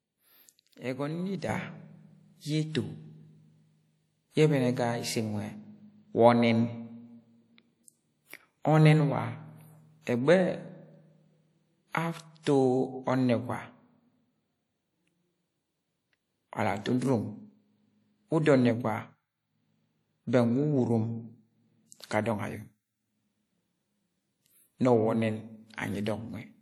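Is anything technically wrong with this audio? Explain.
Yes, there are three problems worth flagging.

The whole clip carries plainly audible codec damage, likely from WMA compression. Long transform blocks smear quantisation noise over tens of milliseconds, so the speech sounds ringing and washy, with hiss that breathes along with it. It fits a bitrate around 48 kbps, and there's nothing above 20.1 kHz.

At 1.49 s there's a sudden gain jump of about 7 dB that holds to the end. Speech and background noise step up together, which points to a gain setting likely applied instantly with no ramp rather than to anything in the recording itself.

Around 12.43 to 12.46 s there's pre-echo: a short hiss of about 38 ms arrives just before a sharp attack. The codec spread noise sized for the loud onset across the quiet stretch ahead of it in the same block, so the attack sounds smeared.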